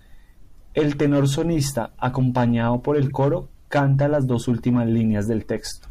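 At 1.70–1.72 s, just before "acompañado por el coro", and again at 3.08–3.11 s, between "acompañado por el" and "coro canta las dos", a corrupt frame decoded throws a brief chirpy blip. Damaged compressed data got played anyway, hitting one frame the first time and a few the second.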